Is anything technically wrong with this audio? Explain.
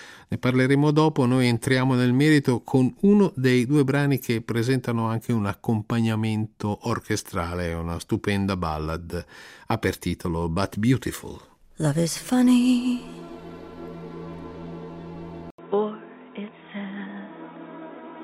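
Yes. At 15.50 s the audio goes silent for 80 ms, then returns duller and boxy, slightly quieter, cut off above 3.8 kHz, with a new background noise well beneath it. This is likely the input switched to a poorer device, narrower and noisier than the first, which lasts to the end.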